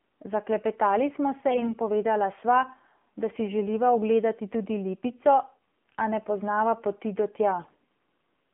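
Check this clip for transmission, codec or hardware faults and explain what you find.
Yes, there are faults: the whole clip has been through a low-rate narrowband mobile codec, and in two short stretches corrupted codec bits make the speech hoarse.

AMR narrowband mobile codec, throughout: the speech is confined to roughly 200 Hz to 3.4 kHz, and the voice has a buzzy, synthetic edge, which fits AMR-NB at its 7.4 kbps mode. The codec rebuilds speech from a vocal-tract model fed by sparse pulses, so at this bitrate the texture itself turns artificial. A plain telephone band filter would dull the highs in the same way, but it would leave the voice natural rather than buzzy.

AMR bit errors, at 1.48 to 1.73 s (just before "povedala sva") and 7.60 to 7.79 s (just after "poznava poti do tja"): flipped bits in the weakly protected part of each frame put the excitation pulses in wrong places and skew the fine pitch, gain and spectral values. 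Something around 5 percent of bits are affected in the first stretch and about 4 percent in the second. The voice keeps its pitch and loudness but turns scratchy and gargly. This sets it apart from lost packets, which would cause gaps or smeared, fading concealment.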